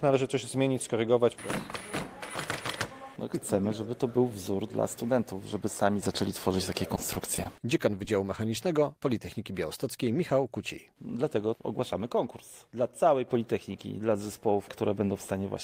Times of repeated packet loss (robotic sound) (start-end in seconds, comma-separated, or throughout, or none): 6.95-7.59